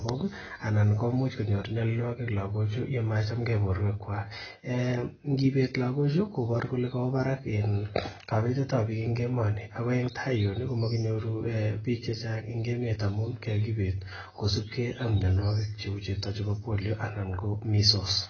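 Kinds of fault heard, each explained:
AAC compression: The speech is dull, with nothing above 6.5 kHz. The damage is heavy, and the sound is smeared and muddy throughout. This is likely the work of a perceptual codec such as AAC-LC running at a very low rate, which fits roughly 18 kbps. The encoder splits each frame into frequency lines and discards what it judges least audible. At this rate it sacrifices the top of the spectrum first and coarsens the rest.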